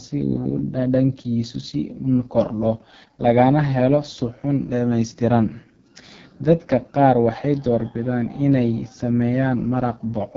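From start to finish the speech carries heavy AMR wideband (HD Voice) codec damage, rough and raspy in a way that fits the codec's lowest 6.6 kbit/s mode, where its pulse-driven vocal tract model has too few bits. A spectrogram shows smeared harmonics, noise-like filling near the top, and nothing above 7.5 kHz.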